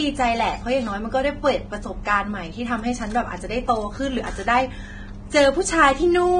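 All the way through, the speech has a grainy, hissy treble with nothing above about 9.7 kHz, and it's likely Vorbis compression at a low bitrate, somewhere in the low twenties of kbps. Fine high-end detail has been swapped for noise, so consonants blur and the tone sounds roughened.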